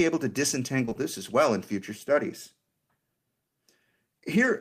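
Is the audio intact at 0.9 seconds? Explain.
No. Short concealed packet loss covers 0.85 to 0.97 s, three back-to-back 20 ms gaps of speech that missed the decoder. The receiver extended the preceding sound across each hole, then blended back, so the moment comes out smeared and wobbly.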